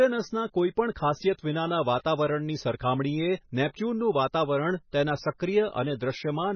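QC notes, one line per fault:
Throughout: MP3 compression. The speech sounds watery and swirly, with nothing above 6.5 kHz and smeared onsets. This is likely a heavily starved MP3 encoder, which fits a bitrate near 18 kbps, cutting the treble and flickering weak frequency lines between frames.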